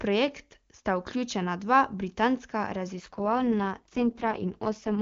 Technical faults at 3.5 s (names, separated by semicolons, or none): AMR rate drop